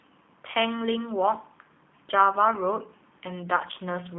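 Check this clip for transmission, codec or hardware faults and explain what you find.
One fault runs through the whole clip: G.729 codec coding. The speech sits in a telephone band of roughly 250 Hz to 3.5 kHz, with nothing above, and the coding damage is plainly audible. The codec discards the waveform and resynthesises each 10 ms frame from a vocal tract filter, a pitch predictor and a few pulses, which fits an 8 kbit/s G.729A stream. That yields a rough, slightly buzzy, synthetic timbre. A plain band-limiting filter would sound muffled but natural, without that roughness.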